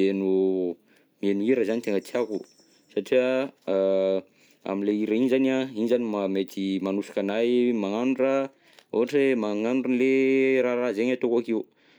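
Listening through the speech recording, nothing stood out as a technical problem at any point.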